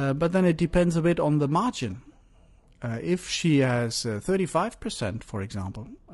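It's a speech clip with plainly audible codec damage from start to finish: a rough, grainy texture with noise between the harmonics and a thin, synthetic top end. That's likely low-delay AAC compression (AAC-ELD), whose short frames blur pitch harmonics, at what sounds like around 32 kbps.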